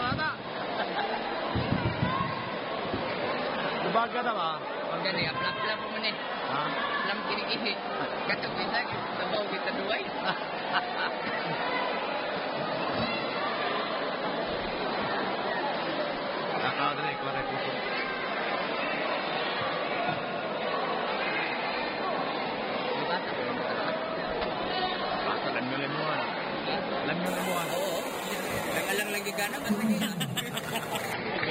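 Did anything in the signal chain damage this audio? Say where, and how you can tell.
Yes. From 27.26 s to 31.13 s a bright, metallic fizz rides on the sound, about 13 dB below it and rising and falling with it, with mirrored energy filling roughly 5.5 to 11 kHz. This is imaging from sample-and-hold upsampling at the sample-rate conversion stage, which fits a jump from about 11 kHz to 48 kHz: each sample was simply repeated, unfiltered, so the spectrum reflects upward.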